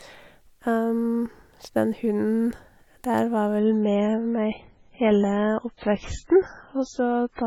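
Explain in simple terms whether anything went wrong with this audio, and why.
Something did go wrong. At 3.59 s the speech suddenly turns duller and a bit swishy, with nothing above 7.6 kHz, right through to the end. That's an adaptive stream at a lower bitrate: the connection slowed, so the player switched to a cheaper copy without any gap.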